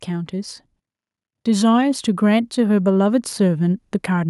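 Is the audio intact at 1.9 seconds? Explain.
No. Automatic gain rising runs from 1.44 to 4.24 s, so 1.9 s falls inside it. Having judged the input too quiet, the gain control is steadily raising its level by about 6 dB, and the speech and background noise swell upward together.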